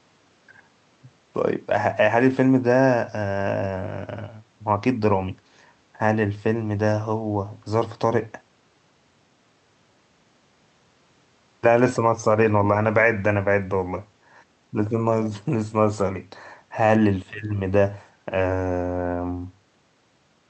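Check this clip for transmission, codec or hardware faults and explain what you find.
No transmission or hardware faults.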